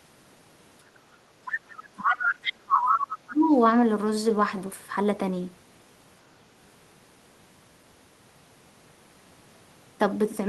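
At 1.46 to 1.56 s a second voice briefly surfaces under the talker, roughly 10 dB down. This is the other side's voice leaking through, likely because the echo canceller left some of the far end's loudspeaker sound in the microphone signal. Further leaks follow at 2.04 to 2.27 s and 2.86 to 3.05 s, now about as loud as the talker, and at 2.44 to 2.53 s, again about 10 dB under. Unlike line crosstalk, these are short fragments that come and go with the far end's talking.

From 1.7 to 3.49 s, while those leaks occur, the talker's own speech is pushed down in pieces, dipping by as much as about 30 dB over roughly 2 s in total. This is speech suppressed in double talk, likely because the canceller could not separate the talker from the echo with both sides speaking at once, so it turned everything down. Unlike a network dropout, the talker's speech is turned down by the canceller, and the dips fall where the other side's voice is present.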